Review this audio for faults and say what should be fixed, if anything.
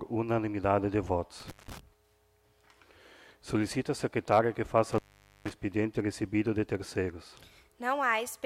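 Intermittent contact cuts the audio twice, at 1.40–1.79 s and 4.92–5.51 s. The gaps last about 173 ms and 472 ms. A loose plug or cable briefly opens, crackling at each edge and leaving faint hiss. Reseat or replace the suspect cable and connectors.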